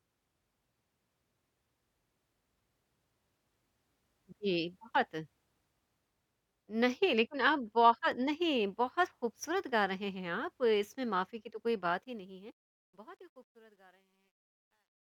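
A fade stage holding only 11 bits without dither causes truncation distortion on a fade from 11.90 s, turning gritty and worst between 13.08 and 15.04 s.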